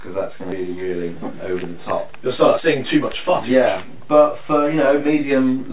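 At 0.52 s there is a skip ahead. Roughly 0.4 s of audio is simply gone. Playback jumps forward with no gap filling the join. From 2.36 to 3.85 s comes a jitter buffer speed-up. Short pitch-period pieces are cut repeatedly, about a fifth of a second in total. The sound runs at 115% with unchanged pitch. Throughout, the narrowband call codec, which fits G.711 A-law, leaves nothing above 4 kHz.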